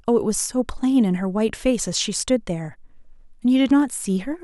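No technical faults are audible anywhere in the speech recording.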